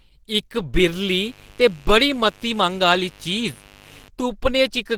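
From the first moment, the speech sounds hoarse and muffled, with a grainy roughness. This is likely Opus compression. The damage is plainly audible. The character fits Opus running in its hybrid speech mode, which it chooses when bits are scarce, here a low rate around 16 kbps. The bandwidth stays full, reaching about 20.2 kHz. The thinning comes from coarse coding of band detail, not from a lowpass.

At 0.75 s a mains buzz starts. It is a steady, raspy drone that lasts until 4.08 s. Its fundamental is 50 Hz. Sharp switching spikes, probably from a dimmer, a rectifier or poor shielding, enter the signal twice per mains cycle. They create a dense ladder of harmonics reaching into the kilohertz range. The buzz sits well below the speech, roughly 30 dB down.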